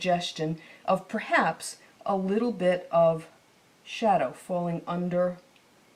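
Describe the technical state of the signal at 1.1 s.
At 1.1 s the signal is intact, with no audible fault at that point.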